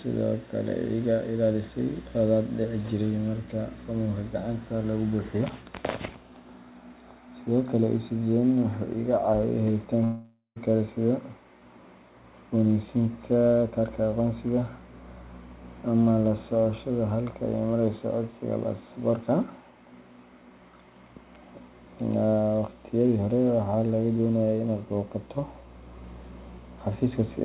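From 10.04 to 10.58 s the speech breaks off into a fading buzz, then about 0.13 s of silence, before resuming at "kale sida" with about half a second of speech gone. A long network dropout is the likely cause, with the receiver filling the gap. Throughout, the band stops at 4 kHz, consistent with a G.711 mu-law call path at 64 kbps.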